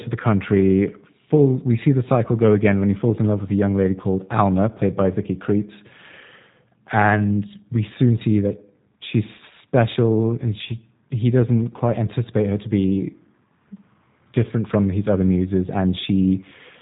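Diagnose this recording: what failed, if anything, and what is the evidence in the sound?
Throughout the speech, the codec damage is plainly audible: the sound is rough and synthetic, with nothing above 3.8 kHz. That points to the G.729 codec, which fits an 8 kbit/s stream rebuilt from a vocal tract filter, pitch predictor and sparse pulses per 10 ms frame.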